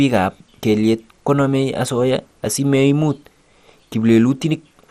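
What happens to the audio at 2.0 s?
At 2.0 s the speech has the dull, gurgly graininess of MP2 compression, likely running around 64 kbps, and it's there for the whole clip. Starved sub-bands drop out or get coarsely quantised, so the top end flickers and nothing survives above about 15.1 kHz.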